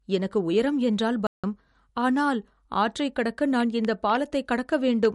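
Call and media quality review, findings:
Low-bitrate audio saved at a high bitrate, throughout the speech: the swirly smearing of a heavily compressed MP3 kept intact. This likely comes from re-encoding a low-rate MP3 at a high rate, which fits roughly 49 kbit/s upstream. The second pass restores nothing.

Playback stall, 1.27 to 1.44 s: speech cuts to silence for about 0.17 s mid-flow, then resumes. Likely cause is the player's buffer running dry or its output thread blocking, so no samples reached the device until it recovered.

Train of clicks, 3.60 to 5.06 s: about five similar pops at an uneven spacing, roughly 2.8 per second, peaking about 10 dB above the speech. The likely source is interference or a faulty connection or power supply injecting repeated pulses.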